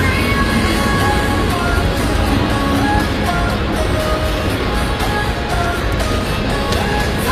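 From start to finish, the top of the spectrum sounds synthetic. The damage is plainly audible. It is likely HE-AAC compression, at a rate that fits a low bitrate near 24 kbps. The codec keeps only the lower bands. It then copies them upward to rebuild the treble. That treble is not the original, so its partials do not line up with those below. Nothing is present above 14.9 kHz.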